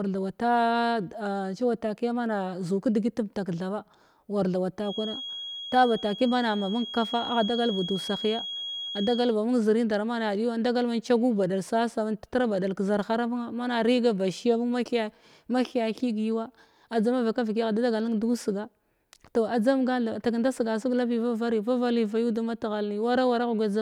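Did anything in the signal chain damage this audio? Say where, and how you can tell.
Yes. From 4.76 to 9.38 s a thin, steady feedback whistle at 3.3 kHz sits roughly 10 dB under the speech, swelling and fading slowly in level. The likely cause is a loudspeaker-to-microphone loop held just below runaway. Unlike mains hum, it is a single high tone with no low harmonic series.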